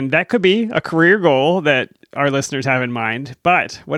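From about 0.34 s to 1.22 s the speech goes through a Bluetooth SBC bit pool drop. The link seems to have got congested, so the encoder cut its bit budget, sounding like a fall from a bit pool around 28 to roughly 13, near 102 kbps. The highest sub-bands get starved and everything else is quantised coarsely, so the top end turns dull and a gritty hash creeps in until the rate climbs back.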